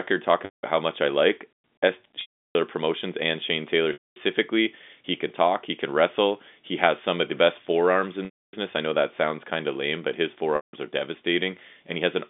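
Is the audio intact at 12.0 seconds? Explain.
Yes, at 12.0 seconds the speech is intact, with no dropout, click or distortion, only the narrow telephone band of the G.711 line it travels over.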